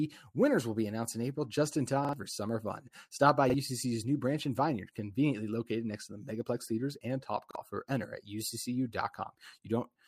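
Speech, with three short stutters from a repeated buffer. At 2.05 s a roughly 43 ms chunk plays twice more, running to 2.13 s. Single repeats follow at 3.50 to 3.54 s and 7.51 to 7.55 s. Each repeat has a hard join. New audio didn't reach the device in time, so it replayed the last buffer, which fits a 2048-sample buffer. About a tenth of a second goes missing at the first spot and roughly 40 ms at the others.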